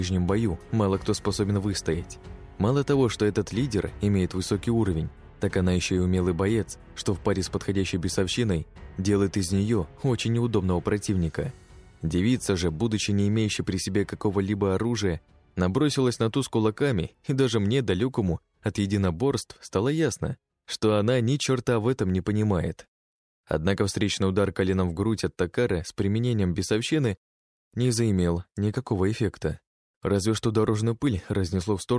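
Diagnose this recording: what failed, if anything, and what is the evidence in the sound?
Nothing stood out on listening to this recording that would point to a failure at any stage.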